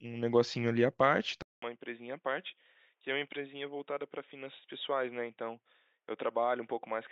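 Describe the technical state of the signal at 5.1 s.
At 5.1 s the input has switched to a poorer device, which it likely did at 1.42 s. After a 200 ms gap, the speech stays dull to the end. Nothing sounds above 3.8 kHz, the level is about 10 dB lower, and there is a faint new background noise.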